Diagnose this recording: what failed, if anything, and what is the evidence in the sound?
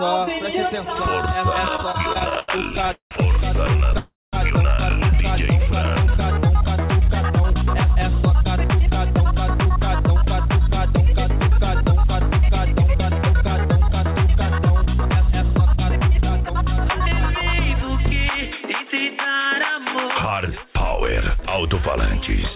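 From 1.76 to 3.14 s the audio drags and stutters through 17 brief holds, the longest 179 ms, concealing about a third of that span, with five shorter holds of up to 27 ms between 3.67 and 3.97 s. These are repeated stalls (stutter): network packets arrived late, the jitter buffer kept running dry, and the receiver stretched the last sound until data resumed.

At 3.98 s the sound hangs, fades, and drops to silence for about 0.21 s before resuming at 4.36 s, roughly 0.35 s later than it should. This call audio freeze likely comes from a single network delay that emptied the jitter buffer, leaving a concealed gap and adding that 351 ms to the playout delay.

Pitch stays put while the pace quickens at 7.21 to 7.45 s (116%), 7.84 to 12.95 s (103%), 15.14 to 17.01 s (105%) and 18.50 to 19.47 s (106%). This is jitter buffer speed-up: to shed the delay built up earlier, the receiver cut many pitch-period-sized slivers, a few hundred milliseconds in total, within the G.711 call path's 4 kHz band.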